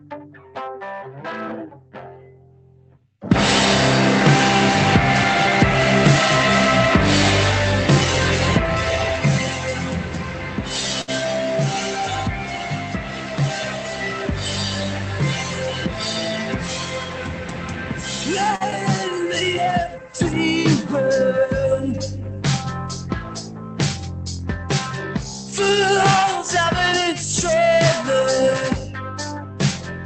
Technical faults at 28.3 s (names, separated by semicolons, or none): noise suppressor applied to music or sounds